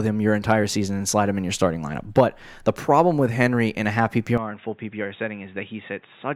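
From 4.38 s, after "in a half", speech turns quieter and dull, nothing above 3.8 kHz, with fresh background noise: likely an input switched to a poorer device.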